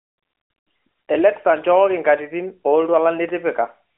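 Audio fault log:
No faults are logged for this speech clip. It carries the narrowband sound of the AMR mobile codec, confined to roughly the 300 Hz to 3.4 kHz telephone band with only light coding texture, which fits its top 12.2 kbps mode.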